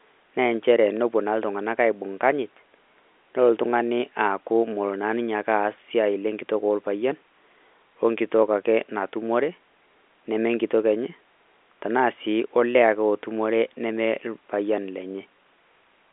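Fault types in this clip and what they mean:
No faults can be heard anywhere in this speech.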